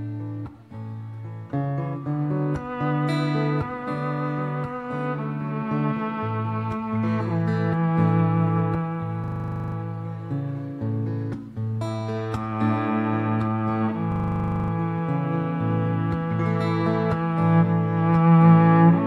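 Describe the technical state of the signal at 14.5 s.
The system froze from 14.12 to 14.72 s, a system hang loop replaying one 40 ms buffer fifteen times as a steady 25 Hz buzz.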